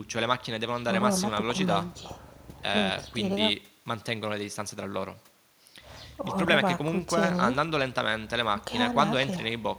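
No technical faults can be heard anywhere in this speech recording. There is no moment in the audio that stands out as a problem.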